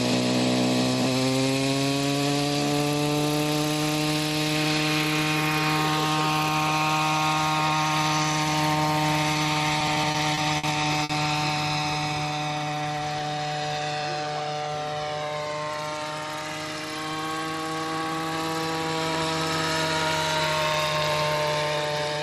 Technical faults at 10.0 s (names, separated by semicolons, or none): repeated stalls (stutter)